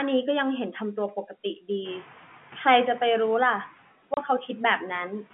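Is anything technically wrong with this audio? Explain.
Yes, there are two faults in this speech.

From 1.84 to 2.07 s the noise suppressor is catching up. At about 2 s the room noise rises suddenly, by about 19 dB, and the suppressor's noise estimate still reflects the quieter background. For roughly 230 ms the louder noise passes with little reduction. Then it sinks by about 6 dB as the estimate adapts. The easing is not a change in the room. A real change would hold steady, whereas here the noise swells and then eases back on its own while the speech level stays put.

From 4.14 to 4.17 s there is packet loss filled with silence. A 30 ms stretch of speech drops to dead silence, and its length fits three 10 ms packets. The receiver had nothing to play for those packets and inserted zeros, so the hole starts and ends with hard edges. Packet loss concealment would sound different, because it smears or repeats the preceding sound to bridge the gap. 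Here the gap is abrupt and fully empty, and even the room noise, which sits about 20 dB below the speech, vanishes with it. The speech stays within the 150 Hz to 3.4 kHz telephone band before and after the hole.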